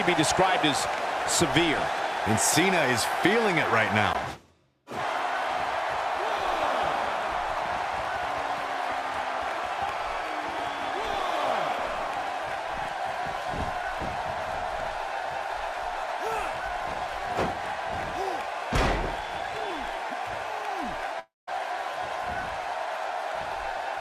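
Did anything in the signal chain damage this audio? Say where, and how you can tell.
Yes. From 21.19 to 21.49 s the last sound smears into a fading buzz, drops to near silence, then resumes with about 0.28 s missing. This is likely a long network dropout: packets stopped arriving and concealment extrapolated before muting.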